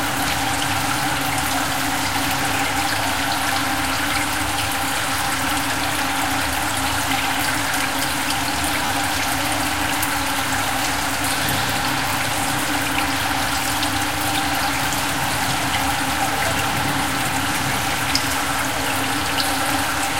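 A recording of sounds has a single Bluetooth stutter from 8.86 to 8.89 s. About 27 ms of audio failed to arrive in time, which fits a couple of lost packets, and the receiver filled the gap by replaying the slice it had just played. When the stream resumes, the sound jumps ahead as though it had kept running. A waveform shows an identical block repeated, then a discontinuity. A spectrogram shows a brief, sharp-edged seam.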